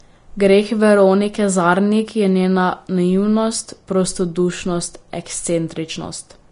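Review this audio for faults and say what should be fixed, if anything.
Throughout the speech there's hiss and graininess with nothing above 10.5 kHz, likely Vorbis compression at a low bitrate, coarsely quantising the treble into noise. Encode at a higher quality setting, or keep a lossless master.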